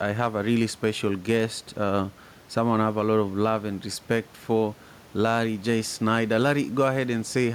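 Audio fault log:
No faults are present in the signal, and the room noise behind the speech sits about 27 dB below it as part of the recording.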